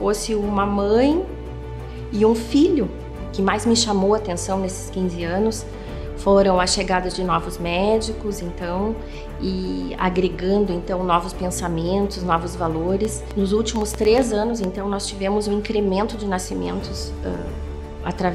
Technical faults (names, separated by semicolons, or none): train of clicks